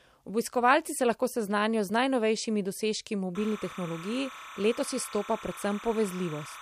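From 3.35 s to the end, timecode bleed appears. Linear timecode at 30 frames per second leaks in, chirping between roughly 1 and 2 kHz, well below the speech.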